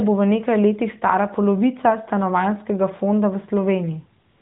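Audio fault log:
4.30–4.42 s, AMR comfort noise: for the last 0.12 s the phone judged the line silent and stopped sending speech frames, so the receiver filled the gap with synthetic noise built from a rough estimate of the background's level and spectral shape. The real ambience gives way to a steady, smooth hiss. On a spectrogram the final slice becomes a flat, uniform wash capped at 4 kHz, like the narrowband speech before it. On the waveform it shows as an even, low-level band with no structure.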